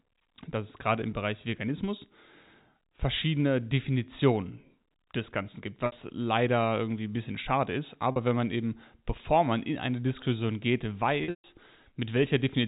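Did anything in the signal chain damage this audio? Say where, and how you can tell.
Yes. Packet loss with pitch repetition occurred at the network stage: 60 ms at 5.86 s before "leider irgendwie ein bisschen", 40 ms at 8.12 s between "ein bisschen schade ist" and "wenn man eben bevor", and 180 ms scattered over 11.24–11.44 s, with a longest run of 140 ms. Each gap is concealed by repeating the last pitch period and fading it out over about 50 ms. The gaps fit packets of about 20 ms.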